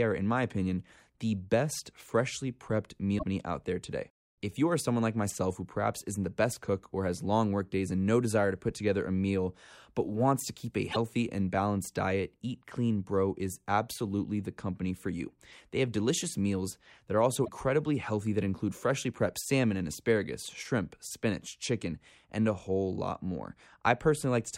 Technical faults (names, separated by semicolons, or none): damaged data in a compressed stream